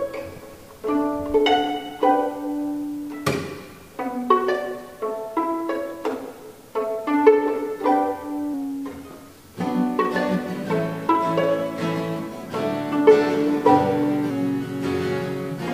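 From 14.30 s to 15.74 s, speed and pitch drop together. Playback runs about 5.8% slow, lowering the pitch by 104 cents, roughly a semitone. It lasts to the end. This is likely a drift correction step, where clock-matching software abruptly changed the playback rate.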